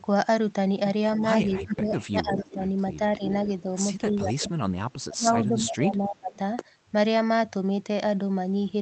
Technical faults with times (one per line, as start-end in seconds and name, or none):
1.17-2.61 speech suppressed in double talk
1.71-2.53 echo leak
3.17-3.46 speech suppressed in double talk
4.03-4.55 speech suppressed in double talk
4.94-6.39 speech suppressed in double talk